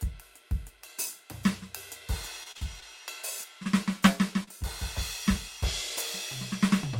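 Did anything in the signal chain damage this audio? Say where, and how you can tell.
Yes. The network stage damaged this music twice. From 2.43 to 2.84 s there is repeated packet loss, with a robotic sound. Four gaps, the longest 38 ms, leave about a quarter of that stretch concealed. Each hole is bridged by extending the previous sound, so the music turns choppy.

The second fault is short concealed packet loss from 4.43 to 4.49 s. About 40 ms of audio arrived too late or never arrived. The decoder stretched the preceding sound across the hole and blended back into the real signal, which leaves a brief smear in the music.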